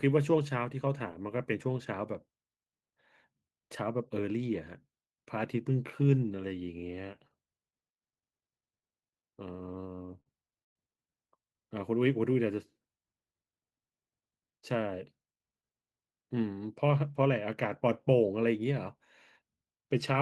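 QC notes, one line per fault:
9.81–10.77 s, repeated stalls (stutter): the speech hitches nine times, each pause held on a stretched copy of the last sound, longest 112 ms. Late packets kept emptying the jitter buffer, so about a quarter of this second is filler; nothing is lost, only delayed.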